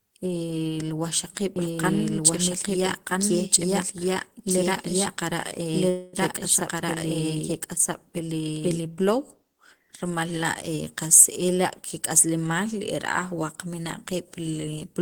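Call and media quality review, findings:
Doubled audio track, 1.56–8.82 s: whole speech heard twice, second copy trailing by roughly a second and a half at about equal level, full-band, dry, with hard onset and cutoff. Likely a second capture path or misaligned edit mixing two copies.

Call audio freeze, 5.89–6.16 s: speech stalls into a fading continuation of the last sound, about 237 ms, then resumes exactly where it stopped with nothing lost. Likely late packets draining the jitter buffer, adding 237 ms of delay.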